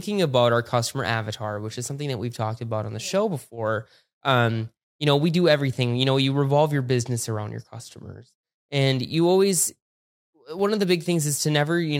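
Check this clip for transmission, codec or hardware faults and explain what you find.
One fault is present: clock drift buffer slips. Starting just after "about our" at 0.88 s, a click recurs every 1.62 s until 10.59 s, just before "of the". That is about seven clicks. The likely cause is two devices running on separate clocks that disagree by around 100 parts per million. The buffer between them slowly drifts until a handful of samples, roughly seven, are dropped or repeated. Each slip breaks the waveform, giving a brief tick.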